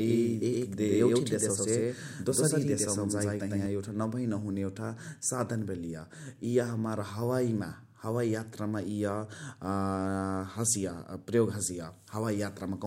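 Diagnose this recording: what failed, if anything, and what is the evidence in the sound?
A doubled audio track runs from the start to 3.66 s. A second full-band copy trails by roughly a tenth of a second at about equal level, likely from a slower second capture path or a misaligned edit. Unlike room echo or reverb, it has no decay or colouring and cuts off abruptly.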